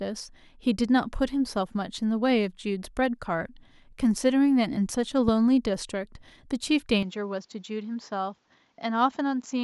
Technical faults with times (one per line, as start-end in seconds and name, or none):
5.28-5.31 loud pop
7.03-9.63 input switched to a poorer device